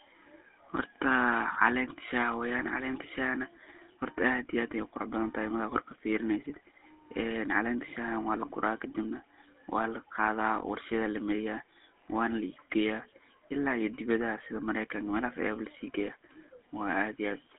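From start to finish the speech has the buzzy, gravelly roughness of the GSM full-rate codec, which fits a 13 kbps phone link. It models the voice as a filter driven by a coarse pulse train. That roughness is plainly audible, and the band sits between 300 Hz and 3.4 kHz.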